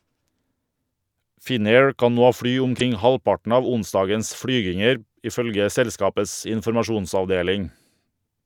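A brief glitch breaks into the speech from 2.77 to 2.82 s, about 50 ms long. This is damaged data in a compressed stream: corrupted bytes there made the decoder misread those frames and lose sync until it found the next valid frame header.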